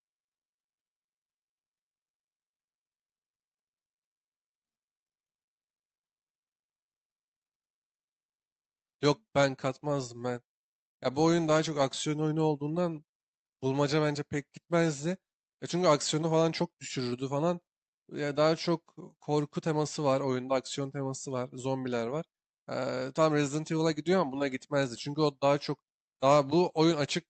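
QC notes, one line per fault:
Nothing stood out on listening to this speech recording, which carries the softened top end, around 8 kHz, of an Opus call path.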